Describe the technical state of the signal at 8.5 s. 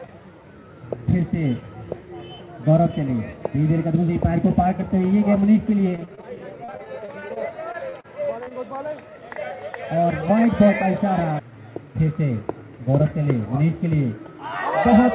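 Right around 8.44 to 8.52 s there's short concealed packet loss, two gaps back to back. The receiver stretched the preceding sound to cover them, so it smears briefly.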